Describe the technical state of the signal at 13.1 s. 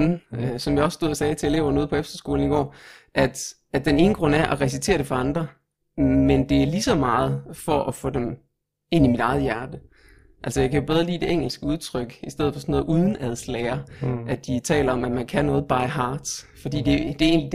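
At 13.1 s the speech carries overlap-add ripple, present across the whole clip: frames rejoined with an overlap that doesn't sum to constant gain, so level dips by about 11 dB around 300 times a second. Unlike slow tremolo, this reads as a metallic buzz with extra tones around each note.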